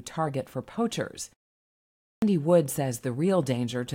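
At 1.9 s, after a pause of about 0.64 s, the speech resumes with a clipped start after a pause: roughly the first 0.32 s, up to 2.22 s, is missing, so the speech jumps in mid-sound. The output device dozed off during the silence and took that long to wake. Muted pauses differ: the background merely dips during gaps and nothing spoken is lost, whereas here the sound's opening is cut away.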